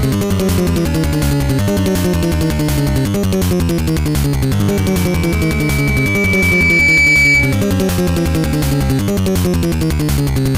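From 4.71 to 7.70 s, a microphone picks up its own loudspeaker and the loop gain passes one at 2.3 kHz: a loudspeaker feedback squeal. The tone swells over about two seconds into a piercing whistle, ending up roughly 5 dB louder than the surrounding sound.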